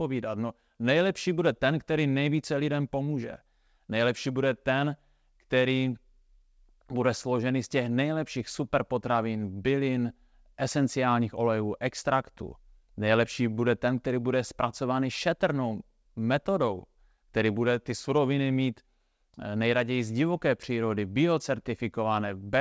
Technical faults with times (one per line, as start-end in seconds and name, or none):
none